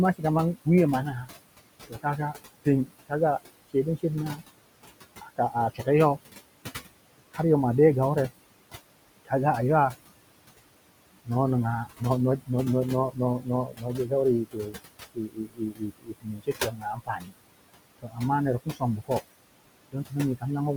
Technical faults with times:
0.00-20.77 noise suppressor artifacts
0.14-5.87 speech cut by the noise suppressor
9.25-9.96 speech cut by the noise suppressor
11.25-20.44 speech cut by the noise suppressor

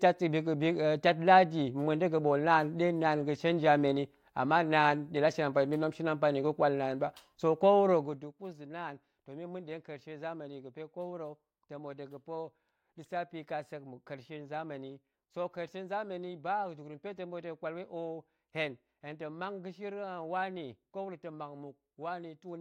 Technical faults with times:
7.92-8.34 zipper noise

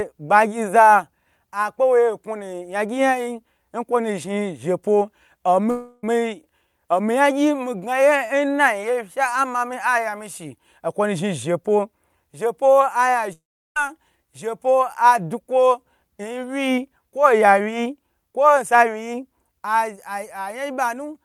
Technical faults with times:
5.70-6.04 long network dropout
13.33-13.77 long network dropout

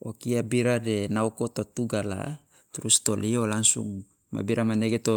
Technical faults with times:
none

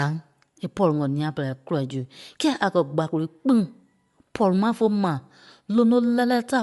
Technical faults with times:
0.00-6.62 Bluetooth LC3 compression

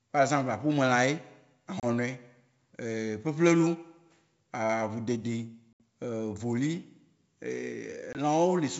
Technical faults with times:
1.80-1.85 packet loss on an ADPCM call
5.73-5.81 packet loss on an ADPCM call
8.13-8.20 packet loss on an ADPCM call

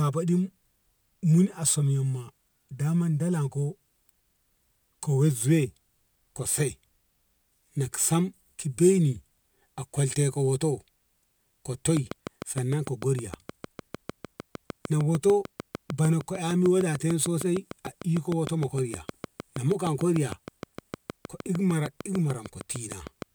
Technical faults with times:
11.97-23.23 train of clicks

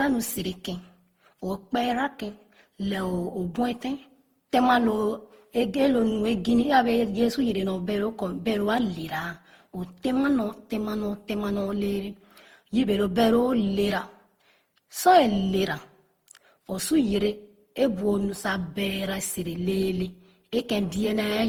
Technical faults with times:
0.00-21.48 generation loss

